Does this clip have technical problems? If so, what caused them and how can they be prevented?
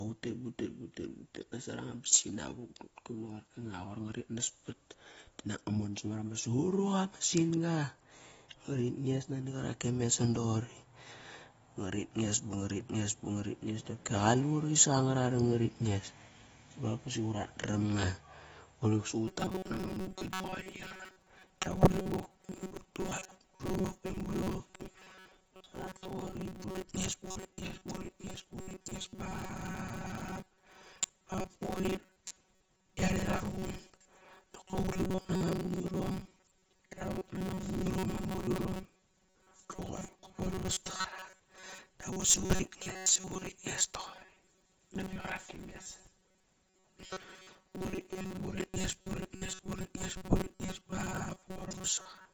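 Yes. Plainly audible AAC compression damage runs through the whole clip, likely from a low bitrate near 24 kbps. The speech sounds dull and smeared. Encoding at a higher bitrate would prevent this.

From 19.28 s to the end, the speech becomes a rigid, metallic buzz at 188 Hz. This is robotic sound from repeated short buffers. Audio likely arrived too seldom, so about half the sound is repeats of one chunk. Repeating a chunk every 5.3 ms imposes that fixed buzz. A larger buffer or a steadier connection would prevent it.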